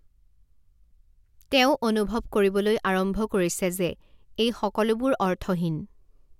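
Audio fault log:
No technical faults are present in this speech recording, and the signal holds steady from its first moment to its last.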